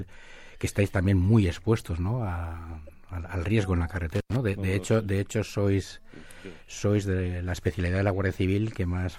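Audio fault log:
2.87–2.93 s: corrupt frame decoded. A short blip in the speech, peaking at about -40 dBFS, spans what sounds like a few damaged compressed frames. The decoder played them despite flipped bits, so misread gains and codes put energy at the wrong frequencies.
4.14–4.36 s: intermittent contact. A loose connection opens for about 97 ms and the speech drops out, with crackle at each edge as the contact breaks and remakes. Faint hiss remains while the line is open.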